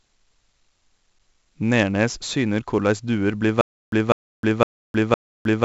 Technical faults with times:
0.00-5.65 4-bit ADPCM compression
3.61-5.65 stutter with silent gaps

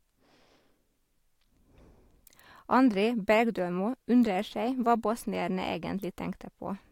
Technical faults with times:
none

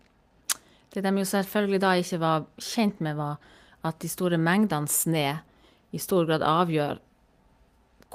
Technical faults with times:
none

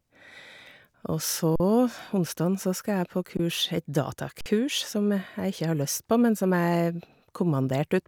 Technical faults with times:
1.56-1.60 underrun with held sample
3.37-3.39 underrun with held sample
4.41-4.46 underrun with held sample

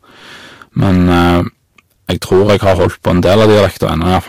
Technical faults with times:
0.00-4.28 hard clipping

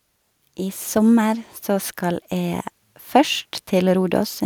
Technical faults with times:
0.41-4.40 automatic gain rising

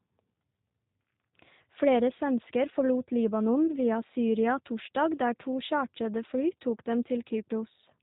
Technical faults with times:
0.00-8.02 G.729 codec
3.67-3.72 VoIP packet loss concealed by the speech codec

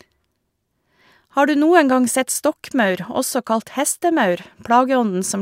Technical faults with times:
none

